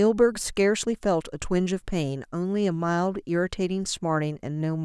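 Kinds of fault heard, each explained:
No technical faults are audible anywhere in the speech.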